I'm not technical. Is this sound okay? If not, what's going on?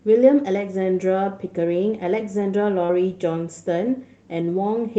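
No. At about 2.85 to 2.91 seconds there is a short concealed packet loss. Roughly 40 ms of the call arrived too late. The receiver stretched the preceding speech to cover the gap, then blended back. You hear a brief smear or wobble.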